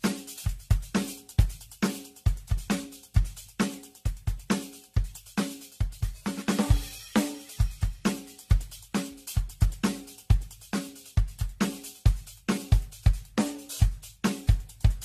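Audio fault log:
throughout: generation loss. The music sounds swirly, smeared and hollow, with transients blurred and nothing above 14 kHz. The likely cause is repeated lossy coding, about ten passes through AAC-LC at 64 kbit/s. Each decode and re-encode quantises the signal on a shifted frame grid, so the quantisation noise and the spectral holes stack up. The result is more degraded than a single encode at that bitrate would be, and the attacks lose their definition.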